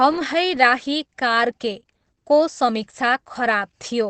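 It's a short speech clip with a compression problem running the whole way through, and it sounds like Opus compression working in its speech mode. The audio is muffled and hoarse, with heavy codec damage throughout and nothing at all above 8.6 kHz, so the top end just stops. That narrowed band and rough texture point to a low bitrate, most likely around 12 kbps, where the encoder drops into its speech-oriented path and gives up bandwidth.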